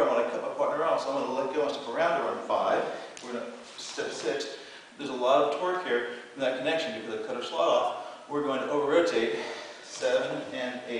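Nothing is technically wrong with the audio; no faults can be heard at any point.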